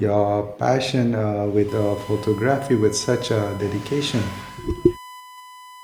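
From about 1.69 s to the end, a steady USB whine sits under the speech, a fixed-pitch tone at 1 kHz, roughly 20 dB below the talker. That pitch is the giveaway: the USB bus pulls current in 1 ms frames, and that thousand-times-a-second ripple is getting into the audio through shared power or ground. You hear it as a thin, constant beep-like hum that doesn't move when the speech does.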